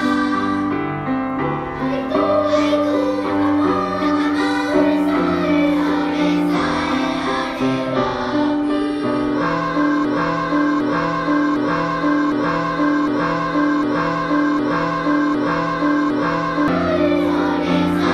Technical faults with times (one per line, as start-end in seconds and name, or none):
10.05-16.68 broken-record loop